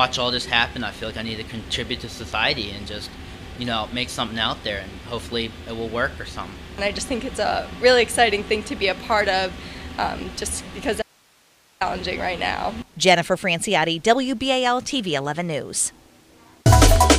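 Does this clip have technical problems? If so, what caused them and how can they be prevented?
Yes. An audio dropout to a faint residue runs from 11.02 to 11.81 s, likely a loss of signal while the path stayed live. Only hiss about 35 dB down remains, a thin flat band on the waveform and faint broadband noise on the spectrogram. Securing cables and connectors prevents it.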